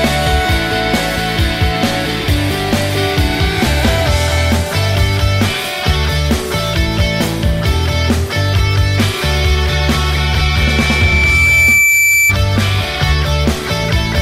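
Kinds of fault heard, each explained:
Loudspeaker feedback squeal: from 10.14 to 12.36 s, a 2.3 kHz tone builds for about two seconds to roughly 5 dB above the sound, as microphone-loudspeaker loop gain exceeds one.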